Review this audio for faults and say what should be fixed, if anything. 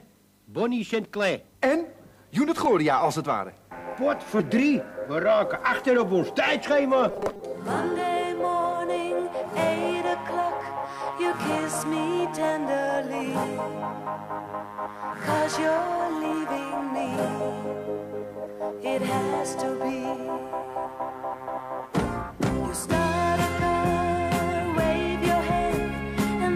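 From 7.10 to 7.42 s the sound turns into a rigid, metallic buzz at 200 Hz, robotic sound from repeated short buffers, likely from a 5 ms chunk replayed in place of about half the missing audio. A fixed-pitch buzz, not an audible stutter or gap, sets it apart from longer dropout repeats. Giving the playback path a larger buffer or more dependable delivery would prevent it.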